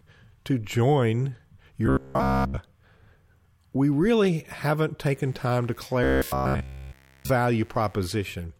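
Robotic sound from repeated short buffers appears from 1.87 to 2.58 s. The speech becomes a hard, metallic drone locked at about 66.7 Hz. It still roughly tracks the syllables, but most of the real audio in that stretch is missing. The likely cause is new data arriving too slowly, so the playback keeps looping the last 15 ms fragment. The repeat rate becomes a fixed buzz.

Mains buzz starts at 5.11 s and continues to 8.34 s. It is a steady, raspy hum built on 60 Hz, with switching spikes twice per cycle producing a dense stack of harmonics that reaches well up the spectrum. It sits around 35 dB below the speech, and sounds like interference picked up through a dimmer, rectifier or unshielded cable.

The robotic sound from repeated short buffers returns from 6.04 to 7.30 s, overlapping the buzz. This time essentially all of the original audio is replaced by the same 66.7 Hz loop of 15 ms fragments. 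The speech is reduced to a rigid mechanical buzz that only follows the rough shape of the speech.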